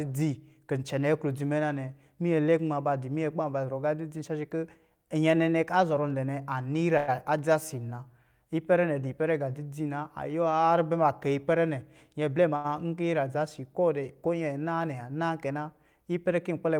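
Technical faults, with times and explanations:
6.97 to 7.10 s, call audio freeze: the speech halts and the last sound is carried on as a fading buzz or hiss for about 0.1 s (103 ms) before continuing exactly where it broke off. No silence appears and no speech is lost. Instead a 103 ms gap is inserted, pushing everything after it later. The likely cause is packets held up in transit, leaving the jitter buffer empty so the receiver had to improvise sound until they arrived.
12.14 to 12.50 s, jitter buffer speed-up: the speech briefly runs about 9% fast (109% speed) while its pitch stays unchanged, giving a hurried delivery. The buffer was holding more audio than it aims for, so the receiver trimmed out many tiny slices, each one or a few pitch periods long, in quick succession. That removed roughly 40 ms in total to pull the delay back down.
12.56 to 12.66 s, short stall from a late packet: just after the speed-up, a sound is held too long for 82 ms with a slight buzz or dip before the speech picks up again from the same point. 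A packet missed its playout time and the jitter buffer ran dry. The receiver stretched the final sound to bridge the wait, so nothing is missing, but the timing slips by 82 ms.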